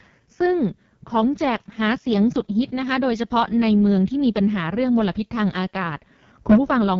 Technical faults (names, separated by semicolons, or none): AMR wideband (HD Voice) codec